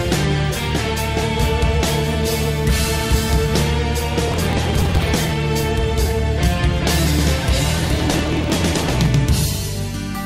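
Processor overload crackle at 4.28–5.31 s and 7.69–9.06 s: around a hundred tiny buffers of about 1.5 ms are skipped, giving gritty tearing, seen as dense vertical broadband streaks and waveform dropouts.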